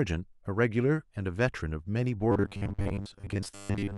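From 2.32 s to the end, the speech becomes a rigid, metallic 100 Hz buzz: robotic sound, likely from a short buffer of about 10 ms repeated in place of most of the audio.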